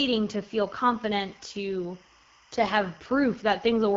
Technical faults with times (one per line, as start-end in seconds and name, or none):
0.00-3.96 timecode bleed
0.00-3.96 AMR wideband (HD Voice) codec